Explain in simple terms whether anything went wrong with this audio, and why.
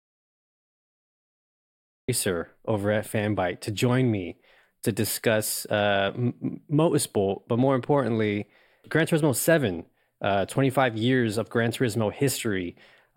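Something did go wrong, right at the start. The recording opens on dead silence that runs until about 2.09 s, and then the speech comes in already mid-flow with "over at". That's an audio dropout to silence: not even faint room hiss, just nothing. Most likely the input was briefly lost, say a loose connection or a mute left on, while the recorder kept going, so whatever came before "over at" simply isn't there.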